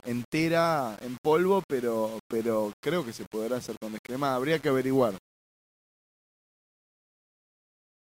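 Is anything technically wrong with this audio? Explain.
Yes. Throughout the speech, the signal was likely reduced to a very low bit depth without dither, consistent with about 6 bits and simple rounding. The error tracks the speech at roughly 25 dB below it, so quiet passages turn gritty and grainy, and the softest tails sputter or drop out.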